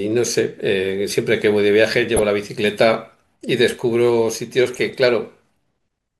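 DAB burbling at 2.17 to 2.23 s: weak reception lets bit errors slip past error correction into the MP2 data, corrupting samples and scale factors so individual sub-bands jump in level. The speech briefly picks up blips of noise, which points to roughly four damaged frames.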